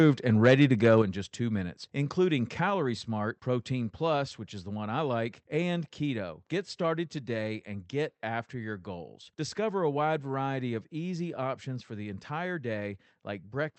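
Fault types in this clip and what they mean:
Microphone volume stepped down: the call software likely lowered the microphone's input volume in one step, so at 1.02 s, just before "in just two minutes", speech and background together fall abruptly by about 6 dB, heard through the call path's 8 kHz band limit.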